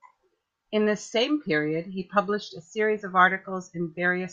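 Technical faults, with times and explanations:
No technical faults can be heard anywhere in this speech recording.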